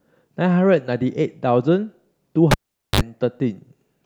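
At 2.51 s a live cable is pulled and plugged in: a pop, 0.44 s of near silence, 50 ms of 50 Hz mains buzz, then another pop at 3.01 s.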